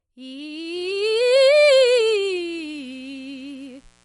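From the start, the music has a watery, swirling quality. Nothing comes through above 11.2 kHz. That hard top edge and the plainly audible smearing point to MP3 compression, likely at a low bitrate near 50 kbps, starving the treble.

At 0.75 s a mains buzz enters and runs to the end. It is a steady, raspy tone built on 60 Hz harmonics. Switching spikes, let in by a dimmer, rectifier or missing shield, leak into the signal. It sits low, well beneath the music.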